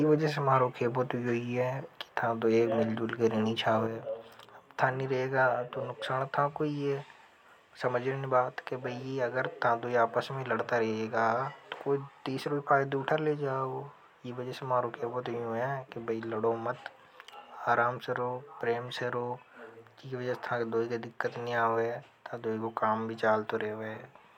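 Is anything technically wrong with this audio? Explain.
Yes. From 3.87 s to the end of the clip, the speech drops abruptly by about 6 dB and stays there. The likely cause is one channel dropping out: one side of a stereo feed was lost, so when the two sides were summed to mono, the material common to both arrived from only one channel, halving its amplitude. Anything carried only on the missing side would vanish, leaving the speech noticeably quieter for the rest of the recording.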